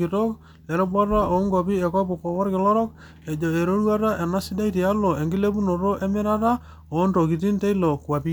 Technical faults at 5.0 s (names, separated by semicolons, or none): none